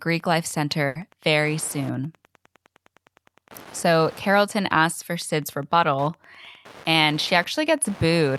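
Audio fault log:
throughout, Wi-Fi interference: A steady ticking runs under the speech at a fixed 102.4 ms spacing, close to ten ticks a second, roughly 25 dB below the speech. A nearby Wi-Fi radio's beacon bursts are being picked up and rectified by the audio circuit, so each beacon becomes a small click. Unlike mains hum or buzz, this is a train of separate ticks at an exact radio-timed rate, not a continuous tone.
0.87 to 0.97 s, burst of packet loss: Just before "very soon" the sound stalls. The last sound heard is stretched out for about 80 ms and fades as the receiver fills the gap. Playback then jumps ahead, so about 80 ms of the speech is lost. This differs from a plain dropout, which would be silent. Here the gap is filled with drawn-out, fading sound, and the speech picks up past the missing part.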